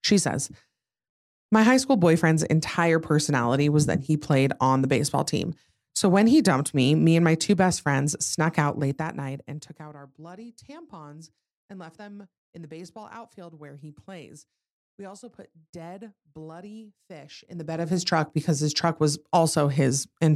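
A speech recording in which a fast ticking, like a zip being drawn, rides on the sound twice: from 8.57 to 9.95 s, after "two best friends snuck", as the level falls by roughly 20 dB, and from 17.41 to 18.0 s, after "also put dead bloody", as it rises by roughly 20 dB. This is zipper noise. The gain moves in unsmoothed 2 dB steps, around ten per second going down and around twenty per second coming up, and each jump leaves a small click.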